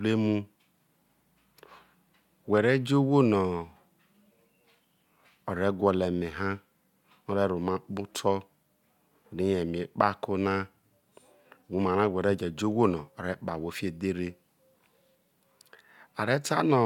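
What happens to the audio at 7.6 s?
Nothing goes wrong at 7.6 s; the speech carries on intact there, with no dropout, click, distortion or other fault at that moment.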